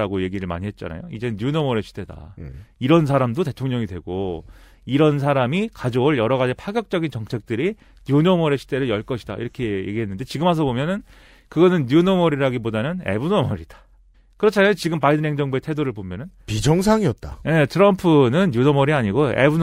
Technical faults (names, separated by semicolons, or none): none